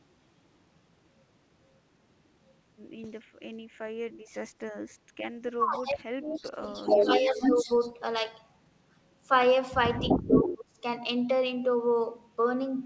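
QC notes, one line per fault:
5.01 to 5.15 s, background gated by the echo canceller: for about 150 ms the room sound behind the speech drops by about 18 dB and then returns. The canceller clamped the microphone while the far end played through the loudspeaker. It affects only the background and recovers quickly, which sets it apart from the longer speech dips that follow. The missing content above 8 kHz comes from the G.722 call path and is not part of this dip.
5.47 to 7.69 s, speech suppressed in double talk: over roughly two seconds the speech dips and breaks up, at its worst by around 30 dB. The likely cause is both sides talking at once, with the canceller unable to separate the local talker from the far-end echo and turning both down. Unlike gating, the speech itself is cut, and not only the room tone.
6.86 to 7.91 s, echo leak: a copy of the speech arriving 249 ms late is heard at roughly the same level as the original. 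It is likely far-end loudspeaker sound that the microphone picked up and the canceller failed to remove. The fixed lag and the doubled quality set it apart from suppression, which removes sound.
9.97 to 10.54 s, echo leak: the same 249 ms repeat returns, this time a little louder than the direct speech, about 5 dB above it, from the same likely incomplete echo cancellation. The delay matches the earlier leak exactly. That points to one consistent echo path, not to room reverberation, which would smear the sound without giving a distinct repeat.
10.19 to 10.78 s, speech suppressed in double talk: for about half a second the speech is chopped and pulled down, by roughly 25 dB at its deepest. It overlaps the end of the second echo leak, which fits the canceller reacting to simultaneous talk. This cut is shorter and shallower than the one at 5.47 s.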